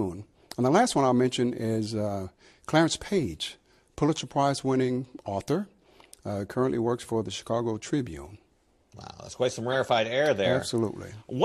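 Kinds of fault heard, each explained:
Corrupt frame decoded: Right after "that's quite some", around 9.72 to 9.76 s, a couple of damaged compressed frames got decoded anyway, so their garbled values throw energy into the wrong frequencies. You hear a brief garbled glitch, peaking roughly at -20 dBFS.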